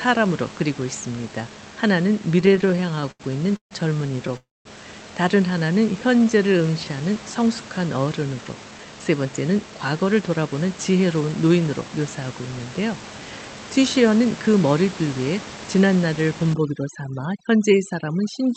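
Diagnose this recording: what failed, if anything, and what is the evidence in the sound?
Repeated stalls (stutter) between 2.31 and 3.74 s: the speech keeps catching and dragging, with about 0.39 s of held-over sound across many tiny gaps, the longest 147 ms. That's the network side: packets arriving late, jitter buffer draining repeatedly, receiver stretching the last sound each time.

At 4.37 to 4.68 s there's a call audio freeze. The sound hangs and fades, then sits silent for about 0.2 s before carrying on where it stopped, adding roughly 285 ms of delay. Likely delayed packets emptied the jitter buffer, and concealment bridged the hole.

Jitter buffer slow-down from 5.79 to 6.86 s: the speech plays at about 88% speed with the pitch unchanged, drawn out by about 135 ms. The receiver was repeating single pitch periods to rebuild its reserve, so it's buffer management rather than the codec.

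Then a jitter buffer speed-up from 8.64 to 11.90 s: the speech runs at about 110%, sounding rushed but at the same pitch, with something like 0.3 s trimmed out overall. The buffer had too much queued and was snipping out pitch periods to cut latency.

From 16.54 s to the end, overdone noise removal kicks in. The room noise, which sits about 15 dB under the speech, drops and breaks up into twinkly specks as quiet bands get gated along with the noise.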